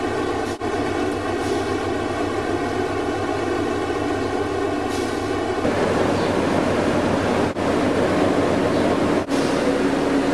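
From the start to about 5.64 s there's channel delay (comb filtering): one side lags the other by roughly 3 ms, and folding them to mono cancels evenly spaced frequencies from somewhere around 200 Hz up, so the sound comes across hollow and phasey.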